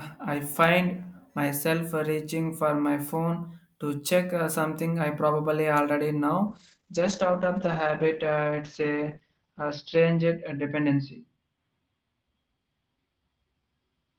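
Speech that, from 6.51 s to the end, suffers a call bitrate drop: the sound loses its top end as the coded bandwidth narrows from about 20 kHz to 6 kHz, and turns rough and watery. The worst stretch lasts about 3.2 s, consistent with the encoder falling from around 64 kbps to roughly 9 kbps. Unlike a plain low-pass filter, which only muffles, this adds coarse, smeared coding artefacts.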